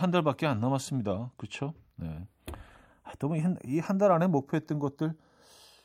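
Speech with the channels drifting apart for the whole clip: the two sides come from separately clocked devices, so their offset slowly grows to about a fifth of a millisecond, consistent with a clock mismatch of around 40 ppm. Summed to mono, the sliding comb notches give a slow flanging sweep.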